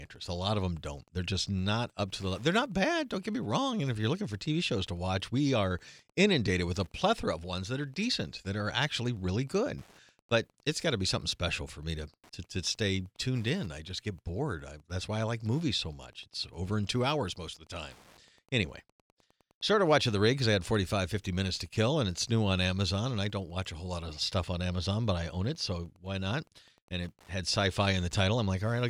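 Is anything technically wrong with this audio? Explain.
Yes. Wi-Fi interference runs through the whole clip. A nearby Wi-Fi radio's beacon, sent every 102.4 ms, is being rectified by the audio circuit. It makes a steady ticking about ten times a second. The ticking sits well below the speech.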